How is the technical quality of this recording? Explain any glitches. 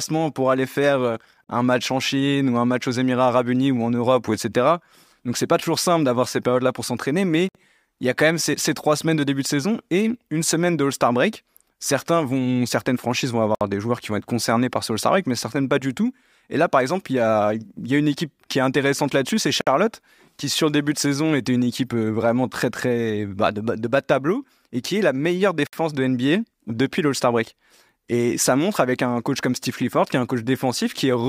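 The speech carries a recurring dropout: a gap at a join of encoded pieces roughly every 6 s, at 1.44, 7.49, 13.55, 19.61 and 25.67 s. The first, after "pour aller faire", lasts 48 ms; the rest, including after "pour s'entraîner mais" and "vont certaines franchises vont", last 60 ms. Segments were encoded separately and concatenated untrimmed, so encoder start delay and end padding leave brief silences with smeared edges before the speech resumes.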